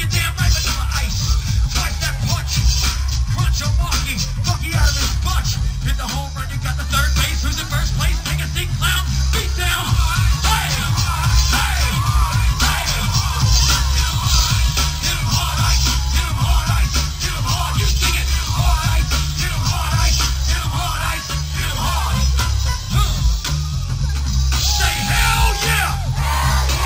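MP2 compression is audible throughout the clip: the sound is dull and carries a gurgling, granular distortion, which fits a low bitrate of about 80 kbps. The likely cause is MPEG Layer II starving its sub-bands of bits, so upper bands flicker off and the rest are coarsely quantised.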